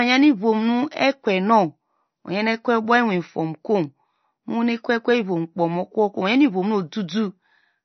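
Throughout the speech, nothing sounds above 6.1 kHz, and a watery swirl is plainly audible. That is likely MP3 compression, starved of bits, which fits 32 kbps.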